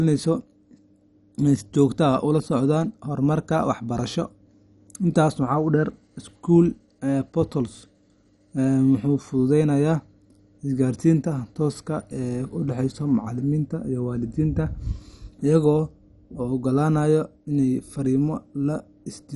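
Throughout, the speech sounds dull and gurgling, with nothing above 11.3 kHz. The likely cause is MP2 compression switching off starved upper sub-bands, which fits about 48 kbps.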